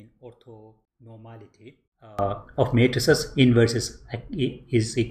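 From 0 to 2.19 s the sound falls by about 23 dB to a faint residue, likely from one channel inverted, so material shared by both channels cancels. Unlike a plain gain drop, everything both channels share vanishes while only their small mismatch survives.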